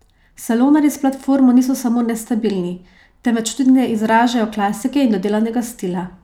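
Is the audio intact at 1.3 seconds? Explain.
Yes, the speech at 1.3 seconds is intact, with no dropout, click, distortion or other fault at that moment.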